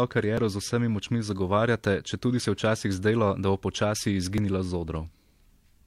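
Overlap between stream segments occurs at 0.38 to 0.40 s and again at 4.38 s in this speech. Neighbouring 2.0 s segments carry time stamps that overlap, so the player discards the shared stretch as if it were duplicated when it was not. About 26 ms of real sound disappears at the first point and roughly 14 ms at the second. Each cut leaves the waveform jumping abruptly, heard as a small click or skip.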